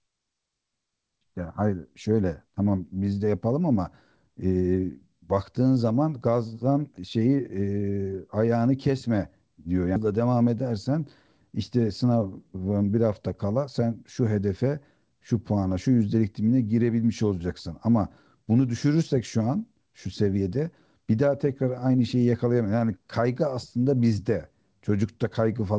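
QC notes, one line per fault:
9.96 s: skip ahead. The speech jumps forward abruptly with no gap to cover it, and roughly 400 ms of audio is missing. The receiver discarded a stretch while later audio was already queued, so the two sides are spliced almost directly and the delay drops by about that much.
12.04 to 12.59 s: jitter buffer speed-up. For about half a second the speech runs noticeably hurried, around 114% speed, yet the pitch stays unchanged. The buffer held more audio than its target, so it trimmed short pitch-period pieces repeatedly, removing about 100 ms in total.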